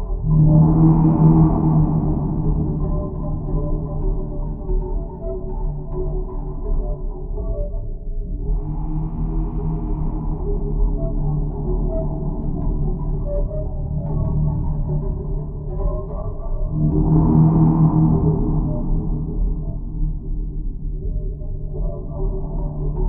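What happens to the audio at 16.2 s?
Compressed frames skipped, from 16.21 to 16.24 s. At this point the decoder never outputs a short run of the encoded audio, either because those frames are missing from the file or because it rejected them as corrupt. The sound jumps forward by around 30 ms, a whole multiple of the frame length.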